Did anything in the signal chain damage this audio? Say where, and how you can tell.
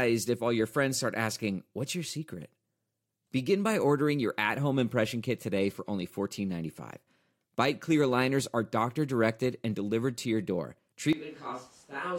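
Yes. Right after "delivered to your door", at 11.13 s, the sound abruptly turns roomy and hollow, about 10 dB quieter and noisier, likely a switch to a distant microphone.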